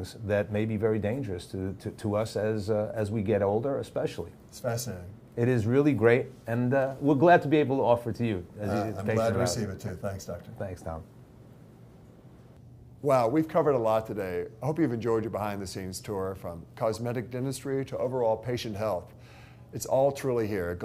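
At 9.87 to 9.89 s a short blip cuts across the sound, lasting about 24 ms and peaking at around -25 dBFS. This is a corrupt frame decoded: flipped bits inside compressed data were played back regardless, so misread gains and codes placed energy at frequencies where none belonged. The brief length points to a damage span of only a few codec frames.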